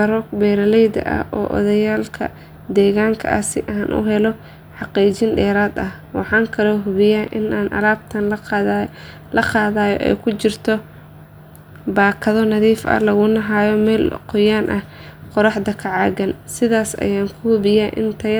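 No technical faults can be heard anywhere in the speech recording.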